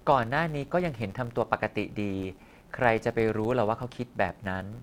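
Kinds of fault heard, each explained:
Filter restarted on every block: a steady 100 Hz buzz sits under the speech for the whole clip, growing louder with the talking and fading as the level drops. The filter discards its memory at each block boundary and starts every block as if from silence, so each block opens with a small transient. Repeating 100 times a second, those ticks merge into a buzz, which points to blocks about 10 ms long.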